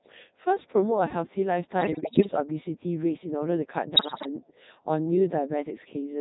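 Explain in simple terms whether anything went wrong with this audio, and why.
The speech went through the Codec 2 vocoder, a radio voice coder that sends only a rough description of the voice (its pitch, loudness and tone) and rebuilds it from simple tones at the other end. That makes the whole clip sound robotic and buzzy.

There are also bit errors on digital voice radio, from about 1.81 to 2.31 s and again from 3.96 to 4.29 s. Corrupted data reached the decoder, so for those moments the voice jumps in pitch and loudness and turns into warbling, bleepy gibberish.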